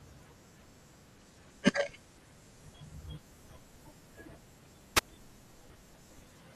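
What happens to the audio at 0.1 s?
Nothing goes wrong at 0.1 s: the speech there plays through intact, with no dropout, click, distortion or other fault.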